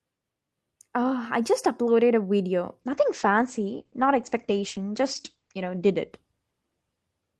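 From 2.82 s, a call bitrate drop starves the encoder, in a way that fits roughly 12 kbps. The speech turns coarse and watery, with everything above 8 kHz gone.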